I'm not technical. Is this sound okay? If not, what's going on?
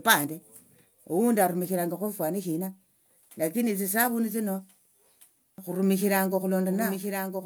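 No, from about 5.58 s to the end there's a doubled audio track: a quieter copy of the speech trails about a second behind, likely from a second, slower recording path.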